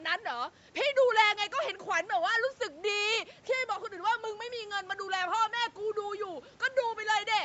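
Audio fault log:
No faults; the call microphone processing sounds as expected.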